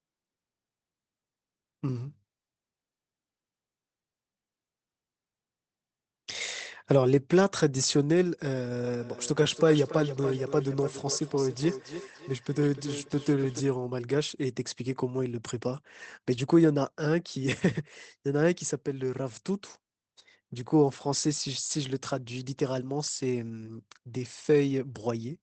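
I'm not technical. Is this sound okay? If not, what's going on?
No. From about 8.85 to 13.66 seconds the speech comes back at you: each bit repeats roughly a third of a second later, quieter, thinner and more ringing. This is feedback echo between two devices. Two phones or computers in the same room were on the same call, so one played the sound and the other's microphone picked it up again. Each device's echo cancelling only removes its own playback, so the repeat got through.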